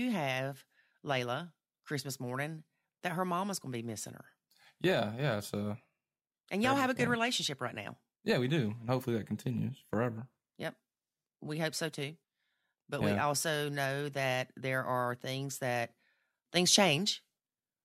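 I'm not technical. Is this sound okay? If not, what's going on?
No. At 16.56 seconds the speech suddenly gets clearly louder, noticeably but not drastically, and stays that way to the end. This is a sudden gain jump, likely a volume setting changed instantly with no gradual ramp. What tells it apart from a speaker simply talking louder is that the quiet background noise between words jumps up at the same instant, and the change happens all at once rather than building gradually.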